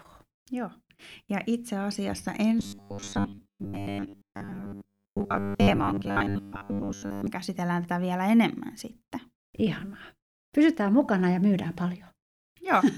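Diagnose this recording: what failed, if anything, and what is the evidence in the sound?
From 2.60 s to 7.27 s the speech turns into robotic sound from repeated short buffers. The voice becomes a rigid, metallic buzz locked at 100 Hz. It still tracks the rough shape of the words. A 100 Hz buzz means a segment of about 10 ms is being replayed over and over. Most of the real audio in that span is lost. The likely cause is a starved driver or buffer stage refilling gaps with its last block.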